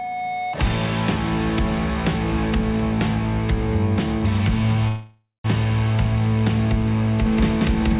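From 4.88 to 5.46 s a call audio freeze fills the gap with fading buzz, then about 200 ms of silence, likely from a starved jitter buffer. Playback resumes where it stopped, so nothing is lost, unlike a dropout. From 7.26 s to the end a doubled audio track adds an equally loud copy about 0.2 s late, likely from a second capture path. It is dry and full-band like the 4 kHz-limited original, not a decaying echo.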